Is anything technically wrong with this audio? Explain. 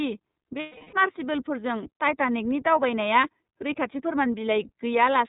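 Yes, there are two faults. The whole clip has passed through the iLBC codec. Nothing above 4 kHz survives, and the speech carries a plainly audible rough, slightly synthetic edge. The band limit and coding texture fit iLBC's 30 ms frame mode at about 13.33 kbps, where each frame's excitation is coded independently.

From 0.60 to 0.94 s, lost iLBC frames leave a 330 ms gap, about eleven 30 ms frames. The decoder covers it by repeating the last pitch cycle mixed with noise and fading it. This is heard as a held, buzzy, breathy vowel, and normal speech returns almost immediately afterwards.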